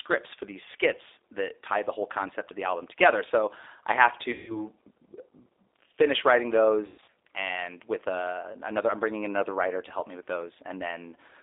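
Speech runs through the whole clip with a rough, plainly synthetic edge, and the sound is confined to a narrow telephone band of roughly 300 Hz to 3.7 kHz. That points to the G.729 codec at 8 kbit/s, which rebuilds each 10 ms frame from a vocal tract model and a handful of pulses, so fine detail is lost. From 4.32 to 4.68 s, and again from 6.86 to 7.11 s, the speech is stretched into a buzzy tone or coloured noise that fades, and stays weak and distorted just afterwards. This is VoIP packet loss concealed by the speech codec. The first gap, about 160 ms of missing audio, fits eight lost packets. The second, about 220 ms scattered over 280 ms with a longest run of 120 ms, fits eleven. In each gap the decoder kept stretching its last pitch and filter at falling gain.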